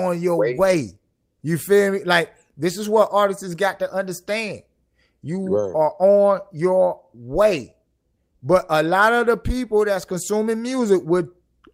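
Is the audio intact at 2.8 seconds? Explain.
Yes, the speech at 2.8 seconds comes through intact, with no dropout, click, distortion or other fault at that point.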